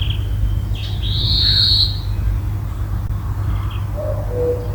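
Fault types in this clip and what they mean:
Short concealed packet loss: Two short pieces of the stream reached the decoder too late, at 1.21 s and 3.07 s. Each time, the receiver stretched the preceding sound forward for 20 ms and blended back. Each repair spans about 40 ms and leaves a brief smear.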